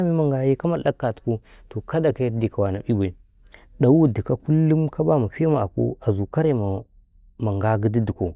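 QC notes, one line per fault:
No faults found in this recording.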